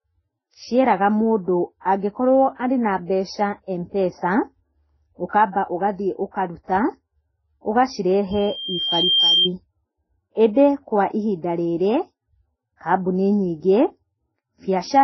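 Transcoding between lossy codecs runs throughout: the speech has nothing above 5.9 kHz and carries two layers of smeared, watery artefacts at once. This likely comes from a low-bitrate MP3 re-encoded to Vorbis, each stage adding its own damage and keeping the lower cut-off.

A loudspeaker feedback squeal runs from 8.31 to 9.50 s. A microphone is hearing its own loudspeaker with loop gain above one at 3.2 kHz, so a pure tone swells over about a second until it sits roughly 5 dB above the speech.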